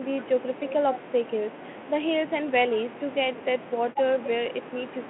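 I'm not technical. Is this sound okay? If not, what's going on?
Yes, no faults here.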